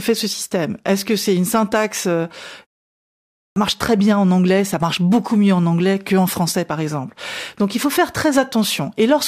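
Clipped start after a pause at 3.45 s: after a 0.87 s silence the output wakes late, swallowing about 112 ms, so "marche très bien en" begins abruptly.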